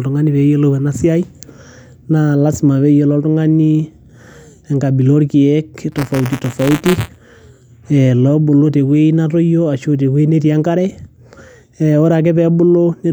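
From 5.92 to 7.19 s the speech picks up a gritty, robotic buzz at about 172 Hz. That's buffer tearing, which fits a 256-sample buffer. The code filling the ring buffer and the hardware draining it have drifted out of step, so they cross mid-period. A small sliver of each buffer still holds audio from one lap back, roughly 20 ms stale. Those hard joins, repeating every buffer, are what make the rattle.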